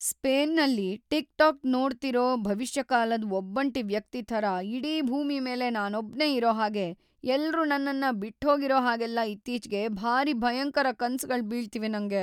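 No technical faults can be heard at any point in this speech recording.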